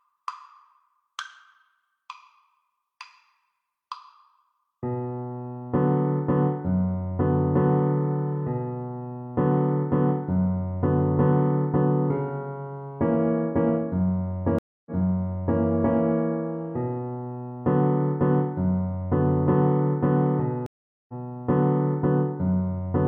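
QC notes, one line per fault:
14.59 to 15.60 s, stream reconnect: the connection dropped, leaving about 0.27 s of silence, then a fresh decoder picked up mid-stream. The server resent a burst, so the audio restarts 743 ms earlier and repeats a bit, easing back in over the first frame or so.
20.66 to 21.13 s, stream reconnect: another drop, this time with 421 ms of silence. The audio resumes about a fifth of a second further on, so a short stretch is skipped, and it fades back in as the new decoder starts.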